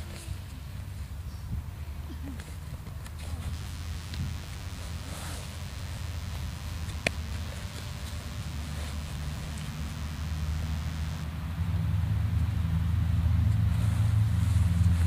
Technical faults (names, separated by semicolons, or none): DECT cordless phone buzz